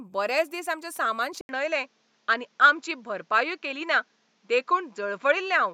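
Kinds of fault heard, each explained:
Input switched to a poorer device: at 1.41 s the speech drops out for 80 ms and comes back duller, with nothing above 7.6 kHz from then to the end. The recording has likely moved to a different microphone or headset input. A plain bandwidth cut or codec downgrade would narrow the sound without the rest. Here everything changes at once: the short gap, a modest level shift, and a faint new background noise well below the speech.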